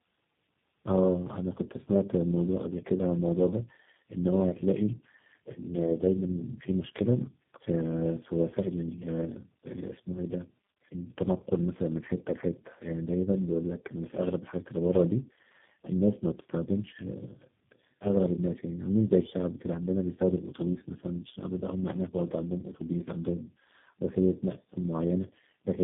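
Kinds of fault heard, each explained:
Tandem speech coding: the speech passed through three low-rate speech codecs in succession, each re-encoding the previous one's already damaged output, so the losses stack. It sounds rougher, more muffled and more warbly than a single coding would, with a character that fits a GSM full-rate, G.723.1 and G.729A chain. A spectrogram shows nothing above 3.8 kHz and smeared, blotchy formant bands. The waveform looks coarse throughout.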